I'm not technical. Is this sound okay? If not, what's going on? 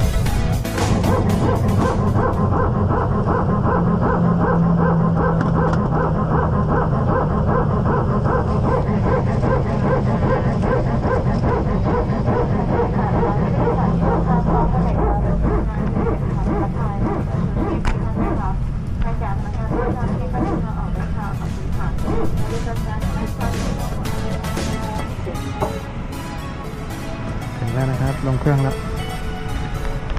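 Yes, this one's fine: nothing in it stands out as a technical problem, so there's nothing here you need to worry about.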